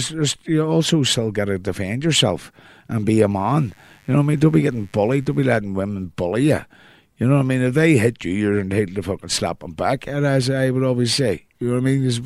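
A speech clip with mains buzz from 3.34 to 5.54 s, between "yourself and be a" and "women bully you", sitting faint, roughly 35 dB under the speech. Switching spikes at twice the 50 Hz mains rate spray harmonics into the kilohertz range, so it rasps rather than droning like a smooth, low hum.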